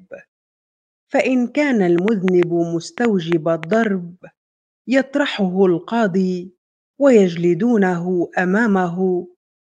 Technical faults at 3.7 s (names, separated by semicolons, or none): train of clicks